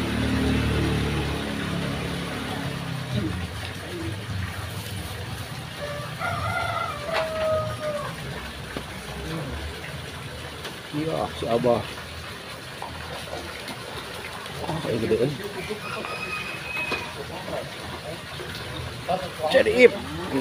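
No technical faults can be heard anywhere in the audio. Nothing in the sound calls for a timestamp or an explanation.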